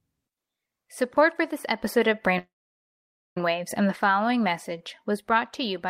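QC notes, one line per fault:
2.38–3.37 s, call audio freeze: after "for this episode of" the last sound trails off as a brief fading buzz, then 0.89 s of silence before "and the following" picks up where it stopped, nothing lost. Likely delayed packets emptying the jitter buffer, adding a 0.98 s gap.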